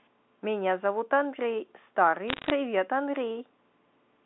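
Bit errors on a digital phone line, 2.28 to 2.5 s: under one percent of bits flip on the mu-law stream, so corrupted samples produce sharp ticks and crackle over the speech.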